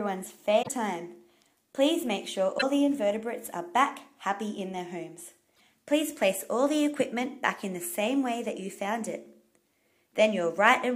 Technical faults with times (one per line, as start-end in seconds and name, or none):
0.62-0.69 damaged data in a compressed stream
2.57-2.63 damaged data in a compressed stream
5.53-5.61 damaged data in a compressed stream